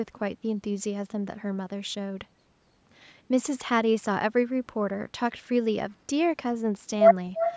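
From 7.39 s to the end at 7.56 s, a faint delayed copy of the speech trails in about 0.35 s behind the original, roughly 10 dB quieter. This is an echo leak, likely from a far-end loudspeaker whose echo canceller let some of its microphone pickup return down the line. On a spectrogram it shows as a weaker repeat of the preceding harmonic pattern, offset in time, with everything stopping at 8 kHz like the rest of the call audio. The waveform shows a low-amplitude tail.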